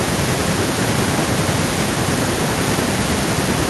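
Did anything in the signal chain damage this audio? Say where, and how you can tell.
Yes. Throughout the speech, every phrase is trailed by a thin copy about 18 dB quieter, arriving about 0.4 s late. That is echo with no canceller, a call-processing fault: the far end's loudspeaker feeds its microphone, and nothing subtracts the returning signal.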